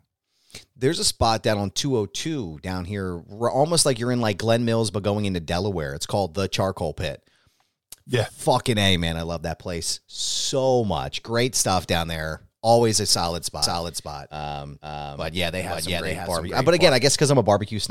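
A doubled audio track runs from 13.62 to 16.90 s in this speech clip, just after "a solid": a second full-band copy trails about half a second behind at roughly equal loudness, with no decay, starting and stopping abruptly, likely from a slower second capture path.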